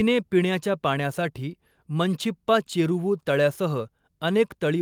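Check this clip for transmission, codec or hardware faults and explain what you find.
The speech signal holds steady and continuous throughout, with no audible transmission, codec or hardware fault anywhere in it.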